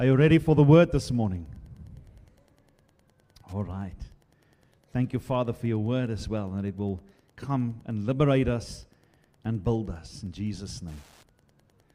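Wi-Fi interference throughout: a faint tick about 40 dB below the sound every 102.4 ms, a nearby radio's beacon rectified by the audio circuit.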